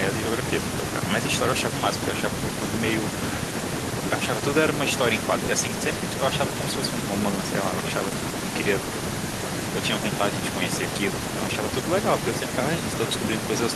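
Listening closely to the speech recording, nothing stood out as a technical problem at any point.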